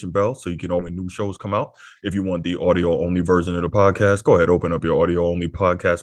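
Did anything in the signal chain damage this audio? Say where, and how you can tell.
Yes. There's a skip ahead at about 0.79 to 0.81 s in this speech: the audio jumps forward with no gap and no fill, so the two sides butt straight together and something like 0.7 s of speech simply isn't there. That points to the network and jitter buffer stage. A chunk was thrown away while later audio was already queued, most likely on a buffer overflow, and playback pulled roughly that same 0.7 s of latency out in one go.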